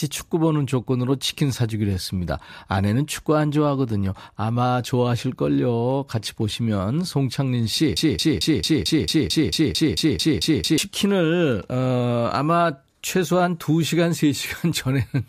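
A speech clip with one fault: a broken-record loop. From 7.97 s to 10.78 s, a fragment of about 0.22 s repeats exactly, back to back, thirteen times. The effect is a stuttering, mechanical chatter in place of the flowing sound. Whatever should have played in those 2.8 seconds is lost. The likely cause is a stall in the player, encoder or stream, which kept resending the last piece it held until it recovered.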